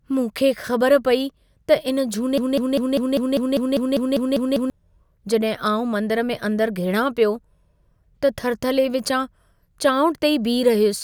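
From 2.38 to 4.70 s the speech falls into a broken-record loop, one 199 ms fragment repeating 12 times, likely from a stalled player resending its last buffer.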